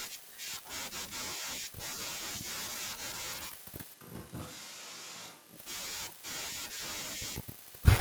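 Switch to a distant microphone, 3.96 to 5.56 s: speech turns suddenly roomy, hollow and roughly 10 dB quieter, with more noise; the close microphone likely failed.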